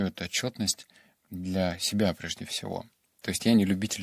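A short stretch of speech, and there's nothing technically wrong to flag anywhere in it.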